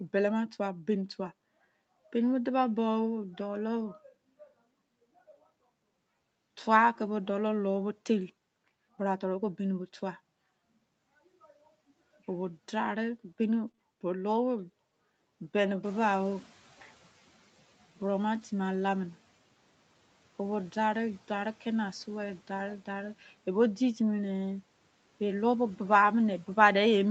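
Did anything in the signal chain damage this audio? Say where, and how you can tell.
Yes. At the network stage, two Opus packets went missing, at 13.67 s and 18.41 s, each covering 20 ms. Neither leaves a gap, because the following packet carried a low-bitrate backup copy through in-band forward error correction, and the decoder played that copy instead. What you hear in each 20 ms stretch is lost packet rebuilt from error correction: a brief patch of rougher, noisier sound where the coarser copy stands in for the original.

Right after the first rebuild, two further 20 ms packets were lost with no backup, back to back from 13.71 s to 13.79 s. This is short concealed packet loss, filled at the jitter buffer and decoder stage. The receiver extended the preceding sound, following its pitch if voiced or using shaped noise if not, then blended back into real audio. The result is a short smear or wobble lasting about 40 ms, where a brief sound can drop out.

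In call processing, the room's background noise rises by about 12 dB around 16 s. That rise belongs to the recording. The fault is the noise suppressor catching up: from 15.83 s to 17.52 s, about 1.7 s, its noise estimate lags behind the new level. During that window the noise leaks through with too little reduction, then sinks by about 8 dB once the estimate adapts. You hear the noise swell and then fade back down.

At 26.33 s there is a single sharp click, visible as a thin vertical line across the spectrum. It points to dropped samples, likely at a driver or buffer hand-off. Only a handful of samples are missing, far less than a millisecond, so no sound is removed. The waveform jumps straight from one value to a later one, and that step produces the click.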